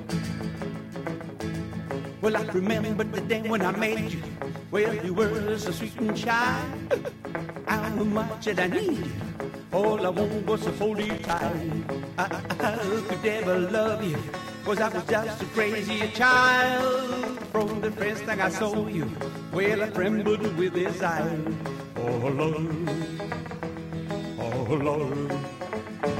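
A worn or dirty contact in the signal path makes and breaks as it shifts, chopping the audio into fragments. This loose connector crackle appears as irregular scratchy bursts from 11.02 to 11.42 s and again from 17.28 to 17.77 s.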